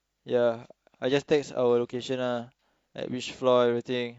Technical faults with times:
none

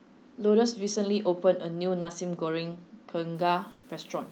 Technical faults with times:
2.01-2.07 short concealed packet loss
3.35-4.31 low bit depth without dither
3.71-3.85 burst of packet loss

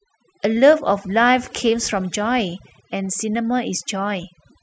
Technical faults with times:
0.00-4.63 overdone noise removal

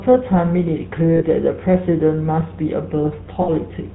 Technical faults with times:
0.00-3.94 GSM full-rate codec
1.16-1.22 lost GSM frames
3.42-3.49 lost GSM frames

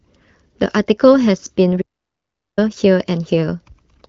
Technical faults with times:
1.81-2.59 playback stall

